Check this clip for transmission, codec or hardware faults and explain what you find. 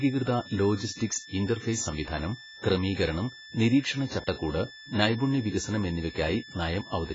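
Two faults run through the whole clip.

Switching supply whistle, throughout: a power supply's audible switching leaks in as a thin whistle wandering between 1.75 and 1.77 kHz, about 20 dB below the speech.

AAC compression, throughout: likely heavy low-bitrate AAC-LC coding, consistent with roughly 16 kbps. Nothing remains above 7.6 kHz, leaving the speech dull and smeared with a warbling, fizzy texture on sibilants.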